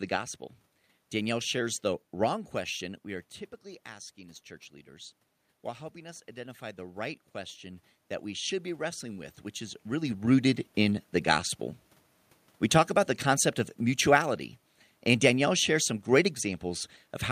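From 3.89 to 9.84 s, automatic gain rising lifts voice and room noise together by about 8 dB, seen as a gradually widening waveform envelope.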